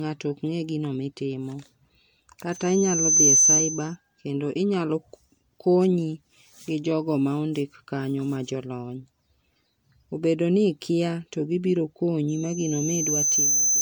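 Generation loss runs through the whole clip: the sound is swirly, hollow and smeared, with blurred attacks, most likely from repeated lossy re-encoding, around seven passes, consistent with MP3 near 96 kbit/s. A spectrogram shows flickering holes and smeared transients.

A loudspeaker feedback squeal at 6.2 kHz swells over roughly 0.7 s from 2.51 s to 3.96 s, peaking about 10 dB above the signal. It returns after "ikia to gibiro" from 12.28 s to the end, rising more slowly and reaching about 5 dB. Each squeal appears as a bright horizontal line on a spectrogram and as a growing envelope on the waveform.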